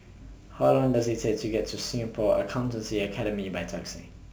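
Crude rate conversion runs throughout the clip. Samples are simply dropped with no filtering, in a repeating pattern that fits a 48 kHz to 44.1 kHz change, leaving error tones about 30 dB below the speech, heard as a gritty, inharmonic fizz trailing louder, brighter sounds.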